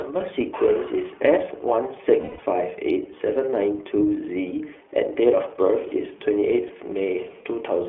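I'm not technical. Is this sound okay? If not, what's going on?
No, the sound has two problems. The whole clip has gone through the iLBC codec, an internet-phone compression method that keeps only the range from 300 Hz to about 3.4 kHz. The speech is clear but muffled and phone-like, with a slightly rough, synthetic edge. Unlike a badly overloaded or distorted recording, it doesn't crackle or break up on loud moments.

The second problem is lost iLBC frames: small pieces of the signal went missing in transit. From 2.20 to 2.40 s the decoder covered roughly 180 ms with a repeated, fading fragment that sounds like a held, slightly buzzy vowel. At 6.68 to 6.71 s there is a much shorter blip. Unlike a dropout, there is no silence, and unlike stuttering, nothing repeats audibly afterward. The speech recovers almost immediately.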